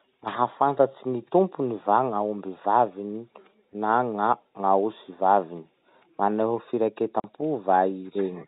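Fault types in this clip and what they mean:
Packet loss filled with silence: at 7.2 s the speech cuts out for 40 ms, which fits two consecutive 20 ms packets lost and replaced by silence with no attempt to conceal the gap. The sound stops and restarts abruptly. On a waveform the gap is a flat line with sheer vertical edges. On a spectrogram it is a blank vertical strip across the telephone band below 4 kHz.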